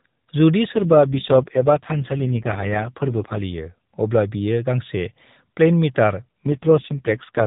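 From 0.72 to 3.43 s and again from 6.46 to 7.46 s, the speech turns rougher and buzzier without gaps: an AMR rate drop, which fits 12.2 falling to 4.75 kbps.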